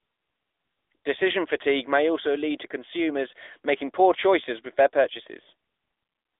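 AMR narrowband mobile codec damage runs throughout the speech. The audio has passed through the 2G/3G mobile speech coder, which samples at 8 kHz and rebuilds the voice from a vocal-tract model excited by a few pulses per 5 ms subframe. The band is confined to roughly 300 Hz to 3.6 kHz, with nothing above 3.7 kHz, so the speech sounds thin and boxy. A plainly audible buzzy, synthetic edge fits a fairly high mode of around 10 kbps.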